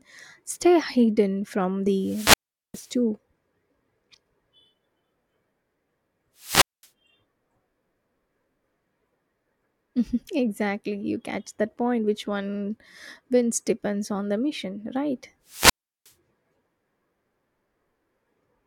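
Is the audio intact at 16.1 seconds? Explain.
No. A wireless microphone squelch dropout runs 15.47 to 16.12 s: fading radio signal trips the receiver's squelch, leaving hiss, then a 0.36 s flat-line hole in the waveform before the speech returns.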